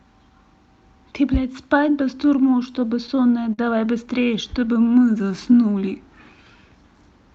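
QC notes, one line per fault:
2.57–3.60 s, repeated stalls (stutter): the speech halts eight times in quick succession as the jitter buffer runs dry, each gap bridged by stretching the last sound rather than leaving silence. The longest hold is 48 ms, and in total about 115 ms is filled this way, roughly 11% of the span. No speech content drops out, but the flow catches and drags, giving a halting, stuttering rhythm.
4.25–5.48 s, jitter buffer slow-down: the receiver pads the stream to rebuild its reserve, repeating single pitch periods and small pieces of pauses back to back. This adds 111 ms, so the passage plays at about 92% speed with pitch unchanged. Vowels and gaps sound slightly drawn out. The audio top-ends near 8 kHz, consistent with the call codec's band limit.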